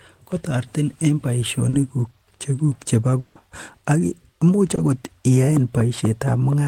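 At 1.69 to 1.75 s, just after "kotoretin en", and again at 4.75 to 4.79 s, short concealed packet loss leaves brief smears where about 40 ms and 20 ms of speech were synthesised. From 3.19 to 3.37 s the sound turns into a fading buzz or hiss continuation for about 160 ms with no silence, likely a long network dropout whose lost speech the receiver papered over.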